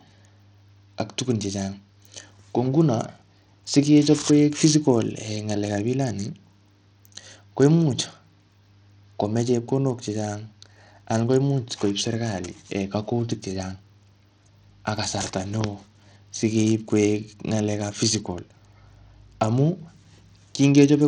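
Bluetooth SBC compression is the likely cause of the damage heard throughout the speech, consistent with a low bitrate of around 80 kbps. Starved upper sub-bands lose their bits, so the treble flickers and drops away, while coarse quantisation leaves a gritty, aliased edge on every phrase.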